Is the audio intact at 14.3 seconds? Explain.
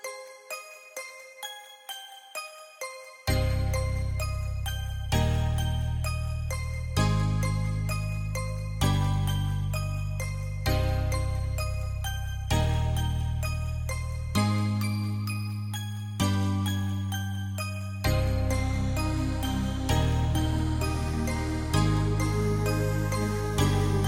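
Yes, the audio is intact at 14.3 seconds, with no audible fault at that moment.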